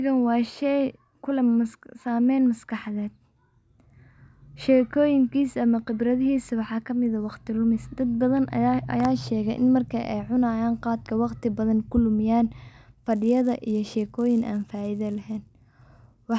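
From 13.11 s to the end, the resampler restarts on every block, leaving edge errors heard as a 100 Hz buzz that, unlike hum, stops whenever the speech pauses.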